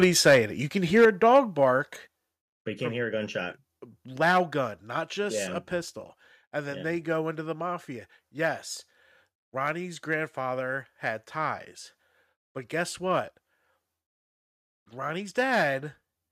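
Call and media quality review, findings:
Microphone overload: harsh, crackly edge on loud speech peaks, 0.02–0.38 s (about 6 dB over) and 0.96–1.64 s after "it you can" (about 7 dB over). Likely mic input gain set too high, flattening a small share of peaks at the converter ceiling.

Microphone volume stepped down: abrupt drops in voice and background level at 0.04 s (about 3 dB), 1.05 s (about 6 dB), 2.07 s just before "but you can't hear" (about 6 dB), 13.2 s after "had ties but guess" (about 2 dB), and 16.29 s (about 2 dB). Likely call software lowering device input gain in single steps, with the first two steps landing inside the overload stretches.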